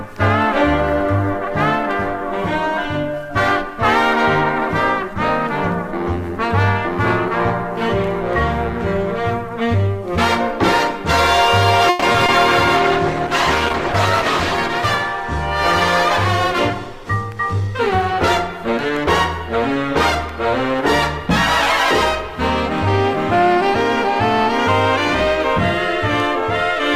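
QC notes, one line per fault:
11.89–12.04 s, call audio freeze: the last sound stretches into a fading buzz for about 130 ms, likely packets stalling and the jitter buffer running dry, then it resumes intact.
12.12 s and 12.26 s, short concealed packet loss: two 20 ms holes patched by extending the previous sound, so you get brief smears or wobbles where audio actually went missing.
12.77–14.64 s, call bitrate drop: the encoder falls from 48 to 14 kbps for about 1.8 s, so the sound turns coarse and dull with the highs trimmed, then clears.
16.97–18.12 s, jitter buffer speed-up: the buffer sheds roughly 70 ms by snipping pitch-period chunks, running about 5% fast at unchanged pitch, which feels slightly rushed.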